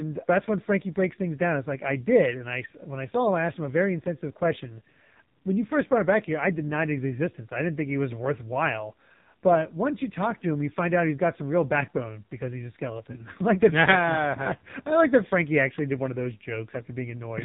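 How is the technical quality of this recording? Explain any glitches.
The technical quality is poor. Heavy narrowband codec damage runs through the whole recording.

The AMR narrowband mobile codec affects the speech from start to finish. Nothing above 4 kHz survives. The voice is rebuilt from a vocal-tract model fed by sparse pulses. It sounds thin, buzzy and synthetic, which fits a low mode near 5.9 kbps.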